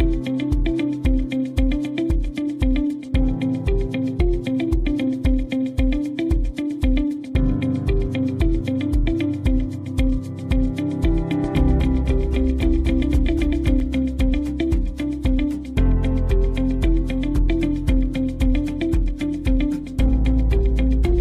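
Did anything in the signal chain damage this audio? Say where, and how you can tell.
Yes. A doubled audio track runs from 11.44 to 13.80 s. A full-band copy trails by roughly 200 ms at about 5 dB lower, with no decay or room colour, and starts and stops abruptly. This is likely a second, slower capture path or an out-of-step edit overlap.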